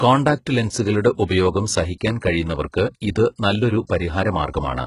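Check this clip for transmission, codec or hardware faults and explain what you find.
Two codec faults are audible in this speech clip: a bandwidth-limited, artificially rebuilt treble throughout, and one pre-echo.

HE-AAC compression runs through the whole clip. Nothing is present above 11.1 kHz. The damage is heavy, which fits a very low bitrate around 12 kbps. The likely cause is HE-AAC with spectral band replication. Only the lower spectrum is truly coded. The treble is synthesised by copying lower bands upward under a rough envelope. Its harmonics no longer match the real ones. Sibilants come out gritty, metallic or lispy.

A pre-echo occurs at 2.2 s, just before "കഴിയുന്നവർക്ക് ഇത് നല്ലൊരു". It spreads over about 18 ms. A sharp onset landed late in a transform block. The codec spread its quantisation noise across that whole block. Noise scaled for the loud attack leaked into the quiet gap ahead of it. 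The result is a brief hiss before the onset, and the attack itself sounds softened and smeared.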